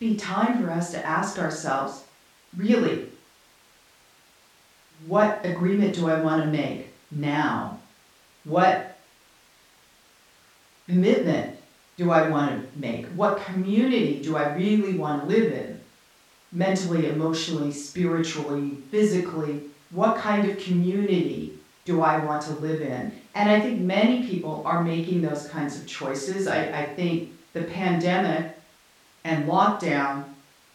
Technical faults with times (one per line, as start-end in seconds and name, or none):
none